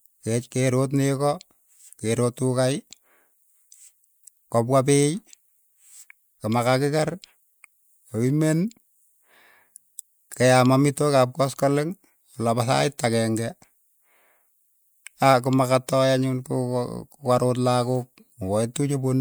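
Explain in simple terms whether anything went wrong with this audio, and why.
Nothing went wrong with this speech recording; the signal stays steady and intact throughout, with no moments where it breaks up, drops out or changes in a way that would point to a technical problem.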